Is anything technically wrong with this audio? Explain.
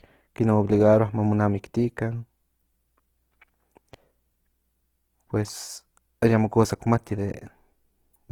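Yes, there is one fault. Opus compression runs throughout: the speech sounds rough, grainy and noisy, with a likely cause of CELT-mode encoding at a bitrate that fits about 16 kbps. Starved bands are rebuilt from folded or noise content, so a spectrogram shows energy reaching 20.2 kHz but with smeared, noise-like texture instead of clean harmonics.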